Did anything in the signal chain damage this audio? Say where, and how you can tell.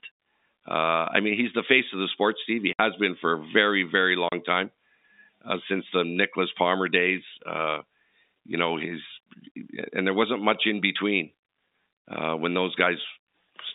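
Yes, at the network stage: packet loss filled with silence. The speech drops out completely from 2.73 to 2.79 s (60 ms) and from 4.29 to 4.32 s (30 ms), with hard edges. Both gaps are multiples of 30 ms, which suggests whole 30 ms packets went missing and were replaced with silence. The G.711 telephone band, roughly 250 Hz to 3.7 kHz, continues unchanged on either side of each gap.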